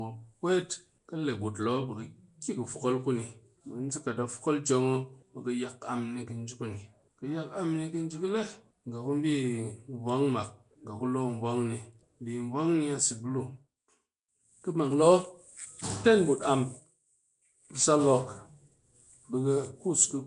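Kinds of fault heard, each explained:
Nellymoser compression: Throughout the clip, the speech is plainly gritty and blurred, with a hissy fizz around it and nothing above 10.6 kHz. This likely comes from Flash's Nellymoser Asao codec, which fits about 44 kbps, allots a fixed two bits per sample across 256-sample blocks, and substitutes noise for unfunded bands.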